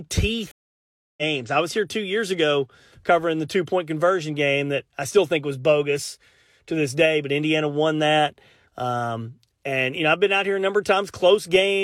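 At 0.51 s the speech drops into a stream reconnect lasting until 1.23 s. The connection broke, leaving about 0.66 s of silence while a new decoder started mid-stream. Speech resumes on "I was here two", roughly half a second further on, so a short stretch is lost.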